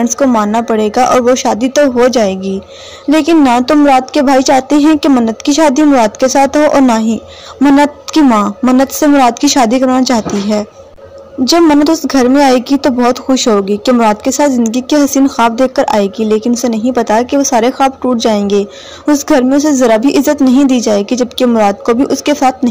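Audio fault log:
throughout, hard clipping: the signal runs about 10 dB past what the stage can pass, so roughly a tenth of the samples are sliced flat. The sharp corners spray harmonics far up the spectrum as a harsh fuzz on every loud passage, unlike soft saturation's rounded, warmer thickening.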